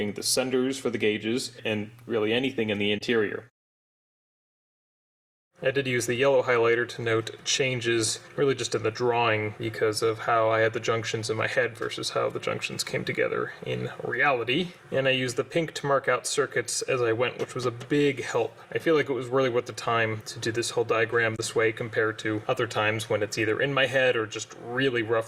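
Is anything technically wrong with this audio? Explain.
No, nothing technically wrong can be heard here.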